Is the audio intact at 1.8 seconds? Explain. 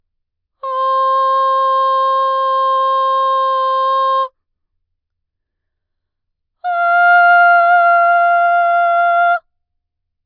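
Yes, the music at 1.8 seconds plays through intact, with no audible fault at that moment.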